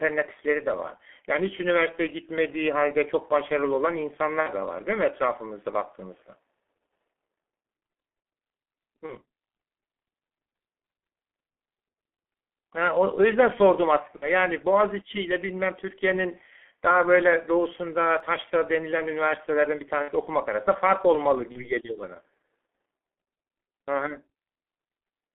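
The speech sounds muffled and hoarse from start to finish, with smeared consonants and no brightness. That is the G.723.1 codec at about 6.3 kbit/s, working through a telephone band of roughly 250 Hz to 3.4 kHz. It rebuilds the voice from a coarse model refreshed only every 30 ms, so fine detail and quick transitions are lost, and the damage here is heavy.

At 4.40–4.49 s, 9.07–9.13 s and 14.16–14.29 s the voice turns into a brief buzzy, stretched tone that sinks in level and stays thin for a moment afterwards. These are VoIP packet loss concealed by the speech codec. The decoder repeats its last pitch and filter with falling gain to fill the hole. The missing stretch fits about 60 ms at 4.40 s and 14.16 s and about 30 ms at 9.07 s. Because each frame depends on the one before, the error carries on past the lost stretch.

At 18.20 s there is a single skip, with the sound on either side joined directly and no silence between. 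A very short piece is gone. This is likely audio missing between chunks, a gap left as a processor closes one block and opens the next, and it fits 10 s chunks.

The same concealed packet loss returns at 20.02–20.11 s, where about 60 ms is missing, and at 21.52–21.71 s, where about 30 ms is missing. Both give the same fading buzz and weak recovery.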